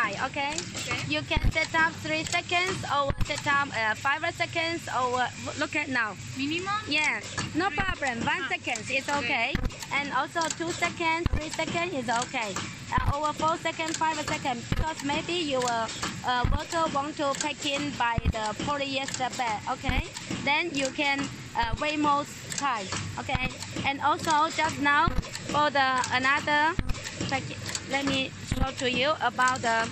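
On listening, nothing in the audio stood out as a technical fault.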